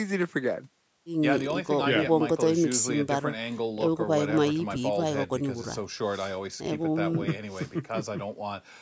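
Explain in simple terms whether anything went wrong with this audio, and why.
Nothing went wrong with this speech audio; the only change is the usual trimming of the very deepest bass that a call's microphone processing always does, and that is normal.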